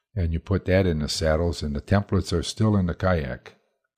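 No technical faults can be heard anywhere in this recording.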